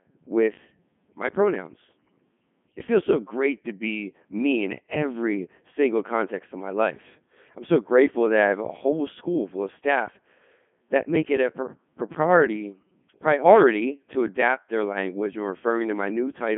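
The speech has been through a Codec 2 vocoder for its whole length, at a rate that sounds like the 3.2 kbit/s top mode. The decoder rebuilds the voice from sine waves using only transmitted pitch, voicing, energy and spectral envelope, so the original waveform is lost. The result is heavily robotic and buzzy, confined to a band of roughly 150 Hz to 3.5 kHz, with nothing above 3.7 kHz.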